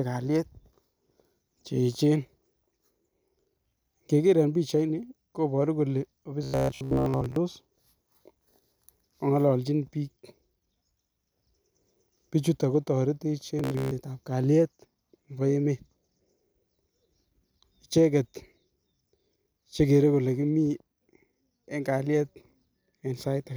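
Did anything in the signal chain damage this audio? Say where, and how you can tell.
Yes, there's robotic sound from repeated short buffers, in the driver or buffer stage, from 6.43 to 7.36 s and from 13.59 to 13.91 s. In both spans the speech becomes a rigid metallic buzz at 66.7 Hz that only loosely tracks the speech. That pitch corresponds to a 15 ms period, so the likely cause is a buffer starved of new audio and filled by replaying its last 15 ms block, with most of the real signal skipped.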